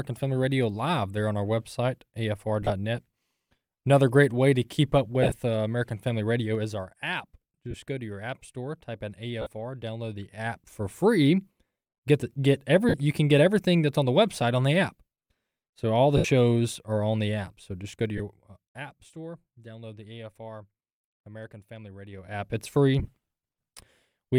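Lost LE Audio frames show up first at 2.62 s, where about 52 ms of audio drops out in bursts scattered over 75 ms, and again at 5.22 s, scattered over 90 ms. When a frame goes missing, the LC3 decoder re-uses the last spectrum with random signs, so the sound smears into noise for a moment instead of going silent.

Around 6.41 to 6.87 s there's zipper noise. The level comes down about 10 dB in 2 dB steps, at roughly ten steps a second, with no smoothing. Each jump leaves a little click, so you hear a ticking riding on the audio while it fades.

More frame losses follow at 7.71 s (30 ms) and 9.42 s (45 ms). Zipper noise returns from 10.12 to 10.77 s as the level rises about 10 dB in slower ticks. There are further losses at 12.89 s (45 ms) and 16.17 s (75 ms).

The longest zipper stretch runs from 17.83 to 19.13 s, a drop of about 20 dB. A brief 15 ms loss at 18.18 s lands inside it. From 22.11 to 22.57 s there's a fast, dense tick as the level climbs about 20 dB. 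The last loss, at 22.99 s, is 52 ms spread over 90 ms. The timing throughout fits 7.5 ms frames.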